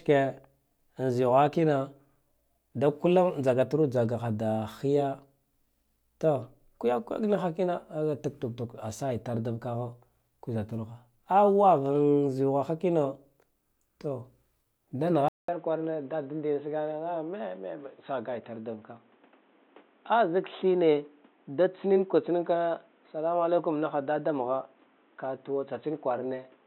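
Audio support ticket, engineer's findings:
Input switched to a poorer device, 15.28 s to end. 200 ms gap, then speech dull and boxy, nothing above 3.9 kHz, level down about 5 dB, new noise floor about 35 dB below. Likely capture moved to a lower-grade mic or headset call profile.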